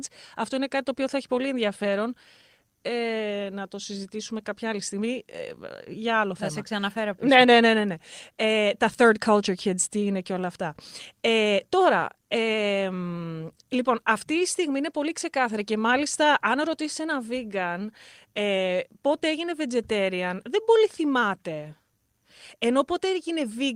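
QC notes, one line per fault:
Nothing to flag here; no technical faults turned up anywhere in this speech clip.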